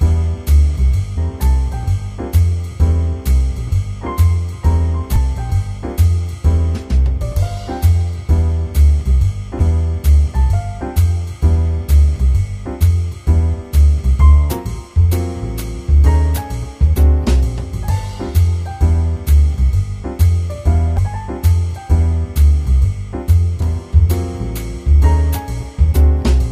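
Damaged data in the compressed stream shows up as five very brief blips, at 1.16, 5.16, 9.59, 20.97 and 23.59 s, each lasting only 10 to 18 ms. At each point, bytes in the encoded stream were corrupted or lost, so the decoder misread or rejected the affected frames, lost sync and hunted for the next valid frame header. What reaches the ear is a short chirp, squawk, click or brief hole that cuts across the sound before normal decoding resumes.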